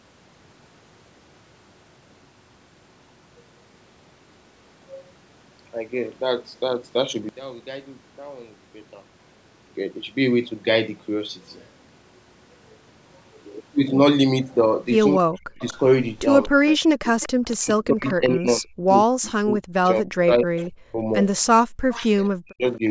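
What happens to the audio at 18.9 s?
At that point the speech is sitting inside a stretch of speech suppressed in double talk, running from 16.49 to 21.08 s. The voice keeps dipping and breaking up for about three seconds in total, at worst dropping around 40 dB, likely because the echo canceller ducked everything while both sides talked at once.

Right at 18.89 to 18.93 s there's also a tiny echo leak: a faint copy of the voice arriving 237 ms late, roughly 35 dB under the speech, likely loudspeaker pickup the canceller didn't fully remove.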